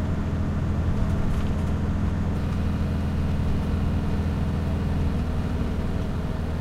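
From about 2.37 s right through to the end, you get periodic clock jitter. Something is wobbling the converter's sample clock at a steady rate, around 3 kHz, so every component of these sounds picks up sidebands on either side at that spacing, with the brighter, higher material hit hardest. What you hear is a grainy, metallic edge riding on everything, which drops away whenever the sound itself goes quiet.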